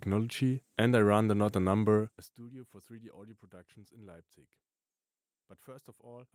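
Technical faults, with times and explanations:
No technical faults can be heard in this speech recording; the signal holds together without any audible disturbance.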